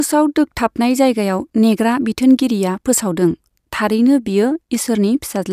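No technical faults are audible.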